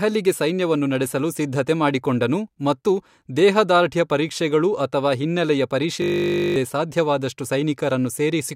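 From 6.02 s to 6.56 s, right after "ದೇಹದಾರ್ಢ್ಯ ಪರೀಕ್ಷೆಗಳು ಅಥವಾ ಹಿನ್ನೆಲೆಯ", a system hang loop takes over the speech. The driver stalled while the hardware kept replaying one 20 ms buffer, so the same fragment repeats 27 times and roughly half a second of audio is lost. The result is a steady 50 Hz buzz. A waveform shows an identical short cycle tiled end to end, and a spectrogram shows rigid harmonic lines spaced 50 Hz apart.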